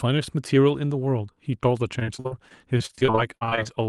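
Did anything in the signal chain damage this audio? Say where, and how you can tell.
Yes, at the network stage. From 1.99 s to 3.67 s the speech breaks into repeated packet loss (robotic sound): more than a dozen short holes, the longest about 55 ms, with roughly a quarter of that stretch filled in by concealment. The receiver covers each missing packet by extending the preceding sound, so the patched pieces sound choppy with parts missing, and the losses come too close together for the speech to recover between them.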